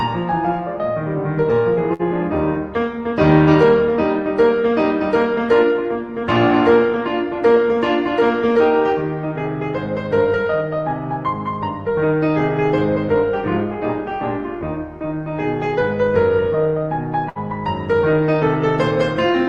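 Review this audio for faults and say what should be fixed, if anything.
Two bursts of packet loss break the music, at 1.93 to 2.02 s and at 17.29 to 17.38 s. Each time, a short run of audio arrived too late or not at all. The receiver extended the last sound to cover the hole, for 57 ms and 63 ms, fading it as it went. Then playback jumps ahead. About 60 ms of music is simply missing at each point. The top end stops near 12 kHz, which points to an Opus call codec.

Enabling forward error correction or redundant packets, with a slightly deeper jitter buffer, would keep gaps this short from reaching the listener.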